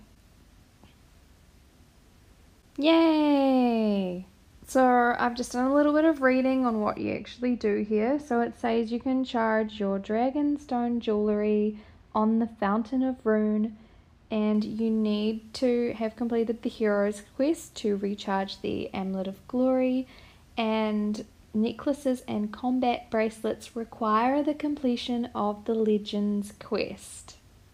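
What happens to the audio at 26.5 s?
Nothing goes wrong at 26.5 s: the audio plays through that moment intact, with no dropout, click, distortion or other fault.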